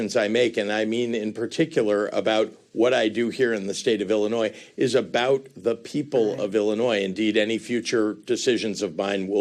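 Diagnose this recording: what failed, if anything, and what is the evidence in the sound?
Nothing failed; no faults audible.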